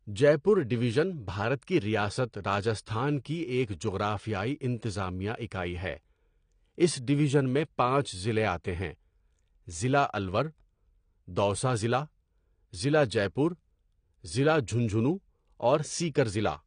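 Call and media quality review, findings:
Dull, smeared speech with fizzy sibilants, whole clip; likely AAC compression at a low bitrate, consistent with about 32 kbps. Spectrogram: hard ceiling near 9.7 kHz.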